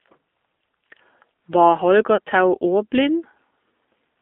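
Across the whole recording the speech carries the sound of the AMR narrowband mobile codec. The passband runs only from about 250 Hz to 3.5 kHz, so it sounds thin and boxed in. The speech has a buzzy, synthetic edge because the encoder rebuilds it from a vocal-tract model excited by sparse pulses rather than coding the waveform. The damage is plainly audible, and its degree fits a low mode around 7.4 kbps.

From 2.16 to 2.20 s there is a brief dip, typical of lost AMR speech frames. The decoder had no valid data for that stretch. It carried forward the previous pitch and vocal-tract settings at reduced gain, which produces the short smeared, weakened patch before normal decoding resumes. The gap is short enough to match a single lost 20 ms frame, so the sound does not fade fully to silence.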